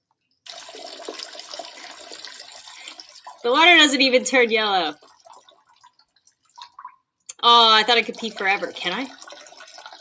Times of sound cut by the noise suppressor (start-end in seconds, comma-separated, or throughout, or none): 2.99-3.44, 4.94-6.29